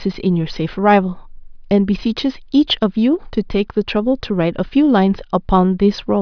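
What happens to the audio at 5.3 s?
Nothing goes wrong at 5.3 s: the speech there plays through cleanly, with no dropout, click, distortion or other fault.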